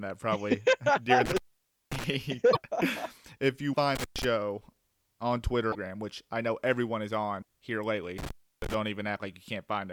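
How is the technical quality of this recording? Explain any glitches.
The recording has two recurring faults: three dropouts from an intermittent contact and four brief glitches that point to a broken MP3 bit reservoir.

Intermittent contact occurs at 1.26–2.04 s, 3.95–4.25 s and 8.18–8.74 s. A loose connection opens momentarily, cutting the signal for about 537 ms, 117 ms and 318 ms respectively. The speech drops out abruptly, with crackle where the contact breaks and remakes.

Short disturbances of roughly 40 ms occur at 2.52, 3.72, 5.71 and 7.41 s. Each is a momentary corruption where the audio skips forward. The likely cause is missing MP3 frames of 26.1 ms each: the following frame draws on reservoir bytes that no longer belong to it and decodes incorrectly.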